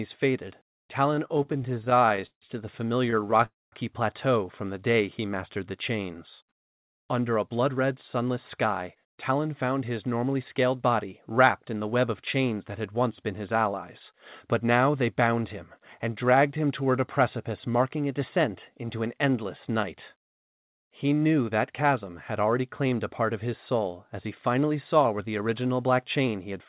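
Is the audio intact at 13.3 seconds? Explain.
Yes, the audio is intact at 13.3 seconds, with no dropout, glitch or distortion at that moment.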